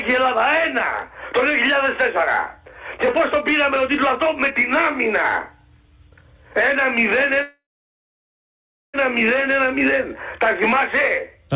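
From 7.42 to 8.96 s, packets were likely held up in transit and the jitter buffer ran empty, causing a call audio freeze. The last sound trails off as a brief fading buzz or hiss, then 1.31 s of silence, before the sound resumes exactly where it stopped, 1.52 s late, with nothing lost.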